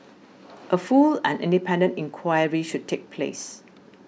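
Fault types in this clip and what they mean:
No faults can be heard anywhere in this speech recording. There is nothing to list for it.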